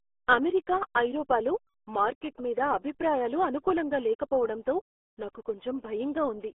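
RealAudio 14.4 codec damage runs throughout: heavy coding, consistent with an 8 kbit/s speech codec, removes everything above 3.8 kHz, leaving the speech muffled and gargly.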